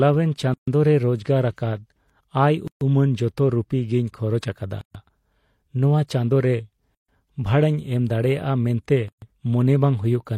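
Speech with a gap at a join of encoded pieces at 0.54, 2.68, 4.81 (after "ᱨᱩᱯᱤ ᱜᱮᱧ ᱠᱷᱚᱨᱚᱪ ᱟᱠᱟᱫᱟ"), 6.95 and 9.08 s. Each is a 136 ms dropout every 2.0 s, visible as blank spectrogram columns with smeared edges, left by untrimmed encoder delay and padding.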